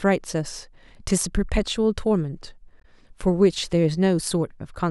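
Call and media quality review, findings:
Damaged data in compressed stream, 2.80–2.85 s: short glitch in the speech. Decoder misreads corrupt frames, loses sync.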